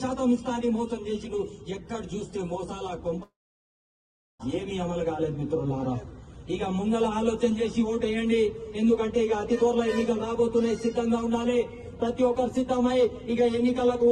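At 3.23 s the sound breaks off into a long network dropout that runs until 4.42 s. For about 1.2 s nothing new arrives. The receiver stretches the last sound into a brief fading buzz, and then roughly a second of near-silence follows. When the audio returns it picks up further on, and the missing stretch is simply gone. This is likely a loss of incoming packets. On a waveform it looks like a short decaying tail followed by a flat gap. A spectrogram shows a smeared band fading into a dark, empty column.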